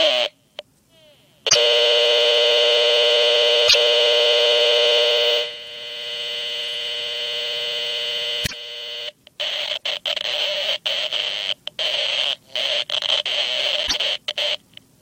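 Broken MP3 bit reservoir, likely, at 1.48, 3.67, 8.45, 9.76 and 13.86 s: the sound skips ahead with an 80 to 84 ms glitch, about three 26.1 ms frames decoded from mismatched borrowed data.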